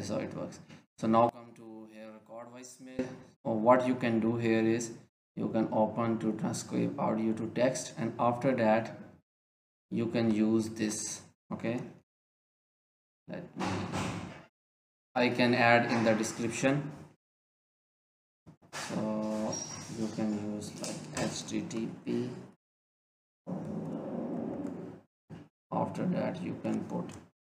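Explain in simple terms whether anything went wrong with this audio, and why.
From 1.29 to 2.99 s the sound almost disappears, leaving only a much quieter remnant. That's likely one channel inverted, cancelling itself when mixed down.

At 8.88 to 9.70 s everything plays about 6% slower and a semitone lower. At 21.72 to 22.58 s it's 6% faster and a semitone higher. Likely a drift correction step each time.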